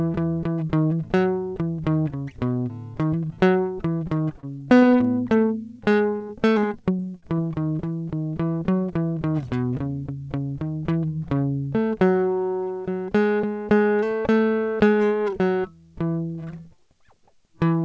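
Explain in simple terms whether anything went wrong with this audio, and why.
Repeated packet loss (robotic sound) struck this music twice, from 4.40 to 5.07 s and from 5.84 to 7.40 s. Short chunks, up to about 30 ms each, went missing and were patched by repeating the previous sound, so the music turns choppy and robotic.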